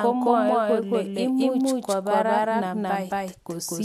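From the start to the end of the speech, a doubled audio track is present: a second, equally loud copy trails the original by about a fifth of a second, so every syllable is immediately restated. Unlike a room echo, the copy has no decay, no softened highs and no reverberant tail; it is a flat, full-band duplicate. The likely cause is the same signal reaching the mix twice, once through a slower capture path.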